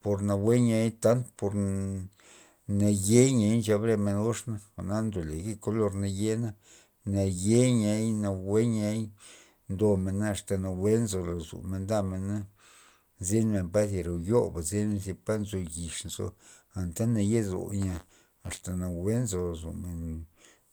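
From 17.81 to 18.62 s, the software filling the playback ring buffer and the hardware draining it fall out of step, so their positions cross inside each period. This is buffer tearing: a small sliver of every buffer still holds speech from about 30 ms earlier, spliced in with abrupt joins on either side. The speech takes on a rough, robotic rattle at 93.8 Hz, which fits a 512-sample buffer, and the buzz rides only on the speech itself.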